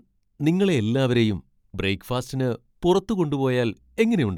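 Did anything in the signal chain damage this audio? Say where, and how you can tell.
No, no damage detected.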